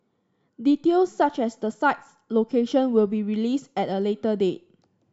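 Listening closely to the speech, nothing stood out as a technical fault at any point.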